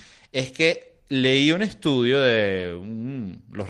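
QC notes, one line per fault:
Nothing to flag on this speech clip; I listened through and heard no faults at all.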